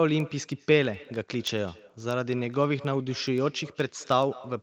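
A speech recording carries two faults. Throughout the clip there is echo with no canceller: every phrase is followed roughly a fifth of a second later by a fainter, thinner copy, about 22 dB below the direct speech. That delay is the round trip of the call. The far end played the audio on a loudspeaker and its microphone picked it up again with nothing removing it, so the return rides on top of the talker continuously. Over that, from 0.20 s to 4.54 s, runs a train of word clock ticks. There are about forty short, sharp clicks at a steady rate of roughly ten per second, and their strength is uneven. Each tick is a single dropped or repeated sample. A digital link was being read by a device on its own free-running clock, and each time the two clocks slipped past each other a sample was lost or doubled. The tick rate fits a mismatch of a couple of hundred parts per million. The audio is band-limited to 8 kHz, consistent with its passage through an Opus call path.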